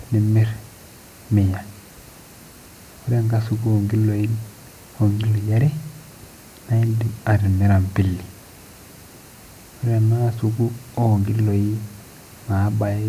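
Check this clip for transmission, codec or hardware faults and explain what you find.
No faults found in this speech recording; nothing to report.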